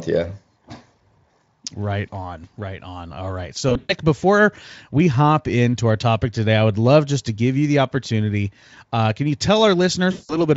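VoIP packet loss concealed by the speech codec breaks this speech clip at 3.69 to 3.94 s and again at 10.11 to 10.37 s. In each gap the decoder keeps repeating its last pitch and filter at falling gain, smearing the sound into a fading buzz or coloured noise. The first gap loses about 160 ms scattered across 200 ms, with a longest run of 120 ms. The second loses about 180 ms. The sound stays weak briefly after packets resume.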